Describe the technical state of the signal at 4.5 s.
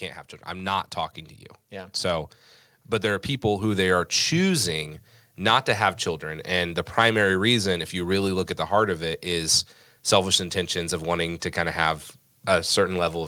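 At 4.5 s, automatic gain rising is underway from 0.48 to 4.95 s: the gain control keeps lifting a quiet input, so speech and background swell together by about 8 dB.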